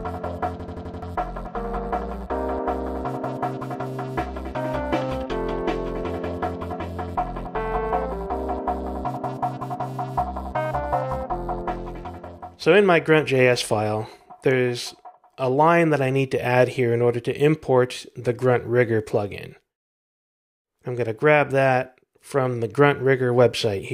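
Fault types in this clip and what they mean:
System hang loop: the playback system stalled while the sound hardware kept replaying its last buffer, so one 85 ms slice of sound repeats exactly five times from about 0.60 to 1.02 s, a rapid stutter at roughly 11.7 Hz that fits a 4096-sample buffer, with around 0.4 s of real audio lost. The waveform shows identical repeating blocks, and the spectrogram shows the same pattern copied side by side with sharp vertical edges at each loop boundary.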